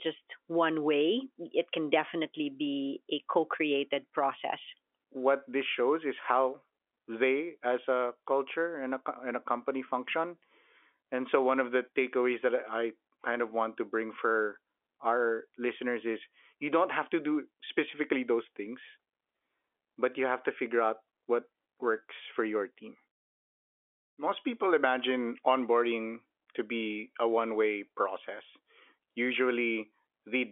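No faults are present; the speech sits in the ordinary G.711 telephone band of roughly 300 Hz to 3.4 kHz, with nothing above about 3.7 kHz, as expected of a standard mu-law phone line.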